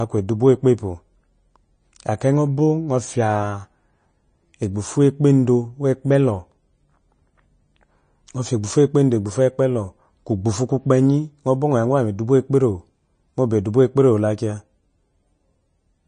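From start to finish the speech sounds dull and watery, with a swirling, unstable texture and nothing at all above 9.4 kHz. This is likely MP3 compression at a low bitrate, plausibly around 30 kbps. Starved of bits, the encoder cuts the treble at a fixed frequency and drops quieter frequency components that then flicker on and off from one frame to the next, which produces the swirl.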